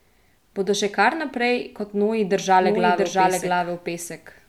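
A doubled audio track enters this speech clip at 2.61 s, just after "kar naprej kot noji", and runs to the end. From there a second, full-band copy of the speech plays roughly 0.7 s behind the original at about the same loudness, with no decay or room colour, and it cuts in abruptly. The likely cause is the same signal being captured a second time through a slower path, or an edit leaving two copies out of step.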